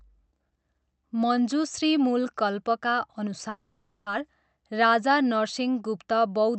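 From 3.49 to 4.09 s, a call audio freeze stretches the last sound into a fading buzz, likely from delayed packets. Speech resumes where it stopped, with nothing skipped.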